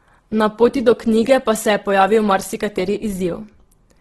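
From start to finish the speech has likely passed through Opus compression in its music-oriented CELT mode, starved of bits in a way that fits a rate near 12 kbps. The encoder holds on to each band's energy but fills whatever it cannot afford to code with folded copies of lower bands or with noise. The damage is heavy: voiced sounds turn rough, grainy and noisy rather than swirly, and nothing remains above 12.1 kHz.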